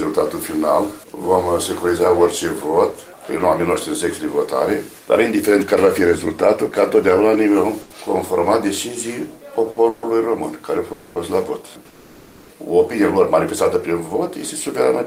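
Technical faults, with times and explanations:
7.81–7.98 s and 9.71–9.80 s, short stall from a late packet: A packet arrived late and the jitter buffer ran dry. The receiver held the last sound for about 90 ms, then 60 ms, giving a slight buzz or dip. Playback then resumed at the same point, so nothing is lost.
9.89–10.06 s, 10.93–11.19 s and 11.88–12.53 s, call audio freeze: The sound hangs and is drawn out as a fading buzz or hiss for 140 ms, 230 ms and then 620 ms, without dropping to silence. This is likely packets held up in transit emptying the jitter buffer. Audio resumes where it stopped, adding delay rather than losing anything.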